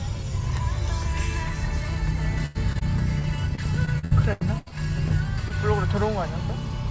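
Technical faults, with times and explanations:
2.46–2.57 s, burst of packet loss: about 80 ms never arrived, so the receiver stretched the last sound into a fading buzz or hiss before playback resumed further on.
2.73–2.77 s and 2.79–2.83 s, short concealed packet loss: two 20 ms holes were filled by continuing the preceding sound, leaving brief smears or wobbles as real audio blended back.
3.19–5.12 s, repeated packet loss (robotic sound): nine gaps, the longest 81 ms, removed about 400 ms. Constant patching of a fifth of this stretch makes it choppy.
5.48–5.52 s, short concealed packet loss: one 20 ms hole was patched with continued sound, heard as a momentary wobble where a short transient may vanish.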